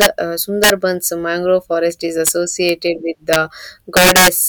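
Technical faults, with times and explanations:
0.01–0.06, 0.64–0.70 (just before "mangrove forest is"), 2.27, 2.69, 3.33–3.36 and 3.97–4.28 s: integer overflow. Loud peaks about 0 to 8 dB past full scale wrap to the opposite sign instead of being limited, so you hear violent cracks much harsher than clipping. The last, longest stretch is the worst.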